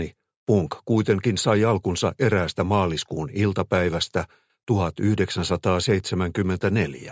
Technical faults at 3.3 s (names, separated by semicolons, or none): none